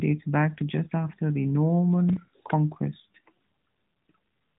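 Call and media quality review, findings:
Processor overload crackle, 2.09–2.28 s: short gritty tearing over the speech; a handful of tiny buffers, roughly 5 ms each, missed deadlines and replayed stale audio with hard edges. Unlike network loss: rapid fine-grained grit, no concealment smear.

AMR rate drop, 2.98–4.14 s: speech turns buzzier and more synthetic, consistent with the AMR-NB link falling from 12.2 to 5.9 kbps; the 4 kHz band stays the same and there is no gap, unlike a band switch or dropout.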